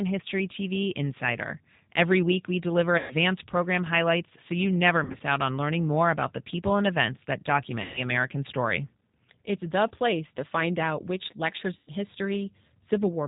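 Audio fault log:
throughout, G.729 codec: the speech is rebuilt at 8 kbit/s from a vocal tract filter, a pitch predictor and a few pulses per frame, so it sounds rough and synthetic, with plainly audible coding damage and nothing above 4 kHz.
2.98–3.15 s, 5.04–5.22 s, 7.82–8.01 s, 11.78–11.91 s, VoIP packet loss concealed by the speech codec: after "week we deliver", "highlights so you never" and "find out which lectures", the decoder covers missing audio (120, 100, 140 and 100 ms) by extending its last pitch and filter, so the sound smears into a fading buzzy tone or coloured noise. The 5.04 s loss is scattered, with runs up to 60 ms.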